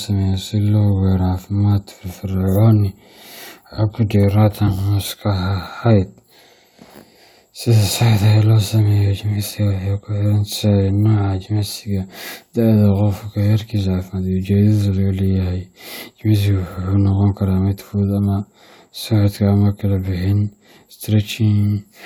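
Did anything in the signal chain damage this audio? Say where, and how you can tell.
No, nothing in the signal chain damaged this audio.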